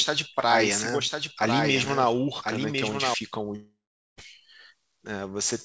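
From the very start of the clip, a doubled audio track is already under way. A second full-band copy of the speech runs about a second behind the original. It sits roughly 5 dB quieter. It carries no decay and no added room colour, so it sounds like a clean overlap rather than an echo. It stops abruptly at 3.14 s. The likely cause is a second capture path or an edit holding two copies out of step.

At 3.56 s a long network dropout begins. The last sound is carried on as a fading buzz or hiss. After that, roughly 0.44 s of silence follows. Sound returns at 4.19 s, but about 0.62 s of audio is simply gone, with no catch-up. This likely comes from packets that never arrived. The call path itself shows nothing above 8 kHz, which fits a G.722 wideband codec.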